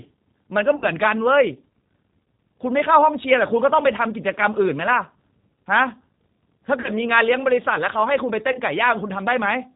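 G.729 codec damage runs throughout. The speech is rebuilt from a vocal tract filter, a pitch predictor and a few pulses per frame, which fits an 8 kbit/s G.729A link. Nothing above 4 kHz survives, and the speech sounds plainly rough and synthetic.

VoIP packet loss concealed by the speech codec occurs at 0.76–0.86 s, 6.80–6.89 s and 8.52–8.61 s, with 60, 40 and 20 ms of sound missing. Each time the decoder stretches its last pitch and filter into a fading buzzy tone or coloured noise, and the speech stays weakened briefly after the gap.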